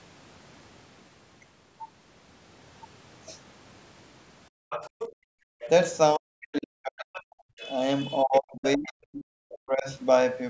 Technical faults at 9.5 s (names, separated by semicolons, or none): speech suppressed in double talk; other side's voice leaking through